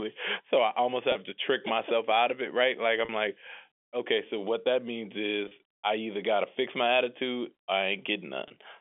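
At 1.12, 3.05, 5.48 and 8.48 s, packet loss with pitch repetition bridges gaps of 30, 40, 30 and 20 ms by looping the last pitch period, which fits lost 10 ms packets. Each sounds like a brief, buzzy held tone over the telephone-band speech, not the silent hole or click of a plain dropout.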